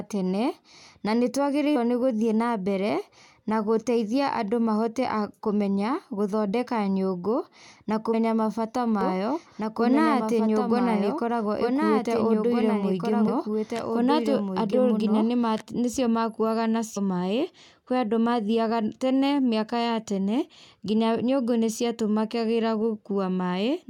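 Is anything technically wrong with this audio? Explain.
Yes. There are two kinds of fault.

Compressed frames skipped at 1.75, 8.13, 13.27 and 16.96 s: the speech jumps forward by roughly a tenth of a second, nearer 150 ms at 13.27 s. That points to several 21.3 ms frames missing or rejected, and the overlapping neighbours leave a short smeared blip, not a click.

Doubled audio track from 9.01 to 15.62 s: a full-band copy of the speech runs about 2 s behind, about 5 dB quieter, dry and without room colour, and it starts and stops abruptly. It is likely from a second, slower capture path or an edit holding two offset copies.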